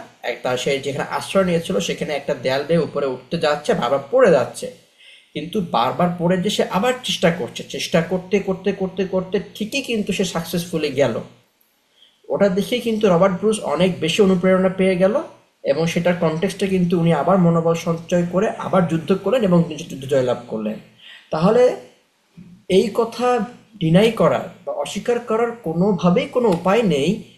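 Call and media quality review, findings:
No fault found on review of the speech audio. No action required.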